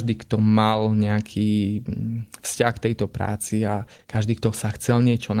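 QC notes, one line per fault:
3.33–4.32 s, scattered short gaps: about seven brief packet losses, each patched by extending the preceding sound, leaving small ticks and smears in the speech.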